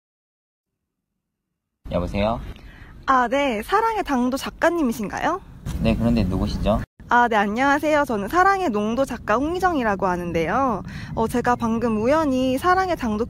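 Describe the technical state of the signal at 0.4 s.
At 0.4 s the audio sits inside an adaptive stream starting at a low bitrate (0.0 to 4.0 s). The player begins on a thin rendition, consistent with 20 kbit/s HE-AAC, so treble sounds synthetic and artefacts are strong. On a spectrogram, upper bands look smeared, then fill in abruptly at 4.0 s but never exceed 14.9 kHz. The waveform shows no gap at the switch.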